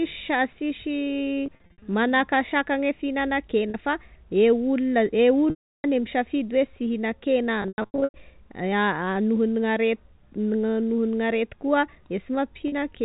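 Packet loss with pitch repetition appears at 1.46–1.82 s, 3.70 s, 5.50–5.84 s, 7.62–8.14 s and 12.68 s. The receiver repeats the last pitch period to fill the gaps. The 40 ms losses sound briefly held and buzzy. The 340 ms loss fades toward silence. The first and fourth losses are scattered, with the longest runs 60 ms and 100 ms long.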